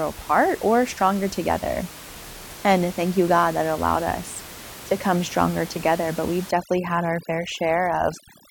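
Overdone noise removal takes hold from 6.51 s to the end at 8.5 s. A noise reducer set far too aggressively is switching individual frequency bands down or off whenever their level sits close to its noise estimate, and the quieter parts of the speech fall below that line with them. The room noise, about 17 dB under the speech before this point, drops and breaks up into twinkling specks.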